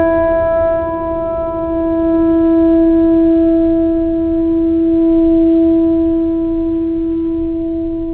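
No faults are audible in the music; the band limit of a telephone-grade call path is present, with nothing above 4 kHz, which fits G.711 mu-law coding at 64 kbps working as designed.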